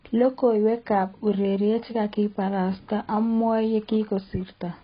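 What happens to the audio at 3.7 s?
AAC compression damage is present at 3.7 s, as it is across the whole clip. The speech has nothing above about 5.1 kHz, and what remains sounds dull and smeared, with a warbling, fizzy texture on sibilants and sustained sounds. This is likely heavy AAC-LC coding at a very low bitrate, consistent with about 16 kbps. To save bits, the encoder dropped the upper band and coarsely quantised the remaining frequency lines.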